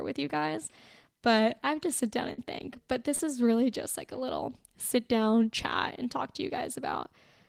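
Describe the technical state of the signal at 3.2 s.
At 3.15 to 3.21 s, just before "is really just like", there is a short concealed packet loss: about 40 ms of speech arrived too late to decode, and the receiver extrapolated the preceding sound across the gap before crossfading back, leaving a brief smeared, wobbly patch.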